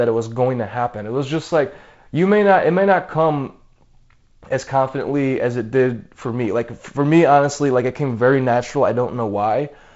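The speech has no technical faults, only the character of G.722 wideband telephone coding: nothing reaches above 7.7 kHz, and a light graininess in the lower band fits the 48 kbit/s mode.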